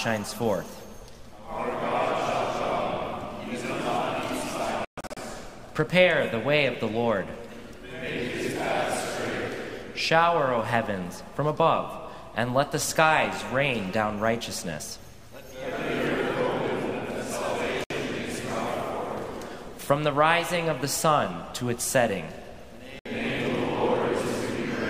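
Digital broadcast dropouts at 4.85 to 5.17 s, 17.84 s and 22.99 s: the receiver muted while frames failed, so the sound vanishes in holes (224 ms lost in pieces over 320 ms first, then 64 ms each) and resumes with the intervening programme gone.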